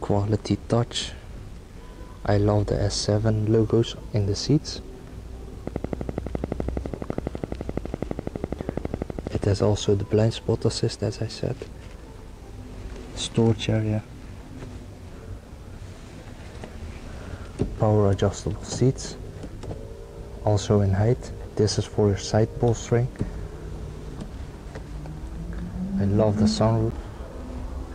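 From 5.7 to 9.6 s a steady ticking runs over the sound, a train of clicks at 12 per second, around fifty in all, alike in shape and peaking about 15 dB above the audio. Interference from nearby equipment or a faulty connection or power supply is the likely cause.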